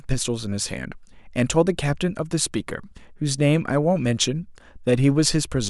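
Dropped samples at 0.44 s in this speech clip: a single sharp click, likely from roughly one lost sample making the waveform jump abruptly.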